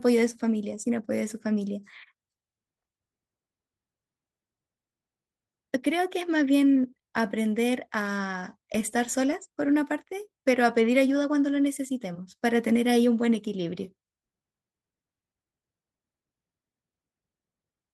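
No technical faults can be heard anywhere in this speech recording. There is nothing here that needs a time or an explanation.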